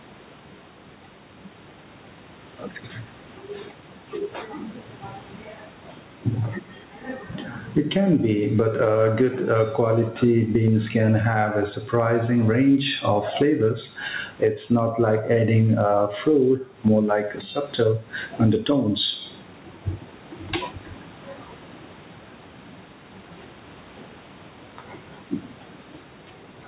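Gain pumping runs through the whole speech clip. The gain swings around 15 dB. Likely cause: excessive gain clamped by a fast limiter.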